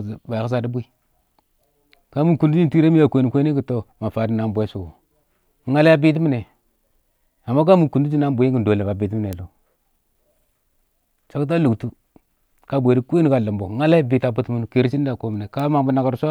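At 9.33 s and again at 15.60 s, the speech carries a bit error spike. Each is a single flipped bit in one sample. The value jumps by a power of two, peaking near about -7 dBFS, then about -13 dBFS. Each sounds like one sharp, broadband tick.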